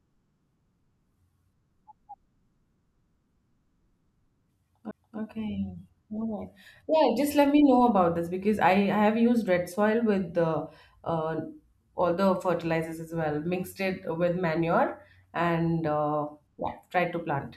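At 4.91 s there's a CD skip in the speech: a knock or a flaw threw the laser onto another turn of the disc's spiral, so the player drops out for roughly 10 ms, you hear a small tick, and the audio picks up from a different spot.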